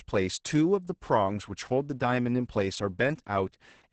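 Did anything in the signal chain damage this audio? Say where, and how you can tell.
Yes, at the codec stage: Opus voice compression throughout the speech. Nothing above about 8.8 kHz survives, and the voice sounds muffled, hoarse and a bit robotic. That fits wideband SILK at roughly 10 kbps, where the excitation gets coded very coarsely.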